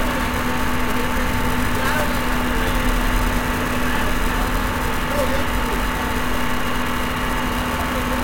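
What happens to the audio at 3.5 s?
Nothing goes wrong at 3.5 s: the sound carries on intact through that moment, with no dropout, click, glitch or other fault.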